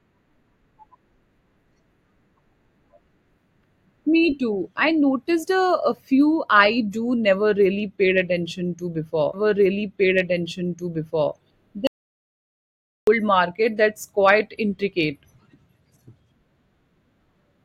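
At 9.33 s a stream segment repeated: the player queued the same two seconds twice, so 9.33 to 11.33 s replays earlier speech after a blip, visible as a duplicated waveform block. From 11.87 to 13.07 s comes an audio dropout to silence, likely a lost input link, leaving 1.2 s of flat silence with no room tone and a blank spectrogram gap.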